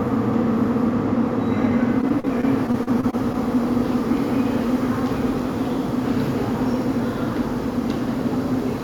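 This recording of sounds turns choppy from 2.01 to 3.36 s. About a dozen brief holes, none longer than 37 ms, break it up. This is repeated packet loss: each missing stretch is patched by extending the preceding sound, and roughly 15% of that span is concealed this way.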